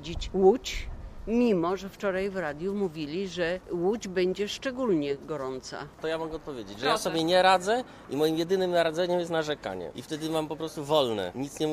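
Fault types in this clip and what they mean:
No technical faults can be heard anywhere in this audio. Nothing in it calls for a fault type or an explanation.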